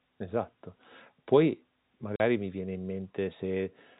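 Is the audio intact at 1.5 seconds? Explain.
Yes, the audio is intact at 1.5 seconds, with the speech carried cleanly through G.711 telephone coding: band-limited below 4 kHz, with only the faint, level-following quantisation noise of that format and no fault at that moment.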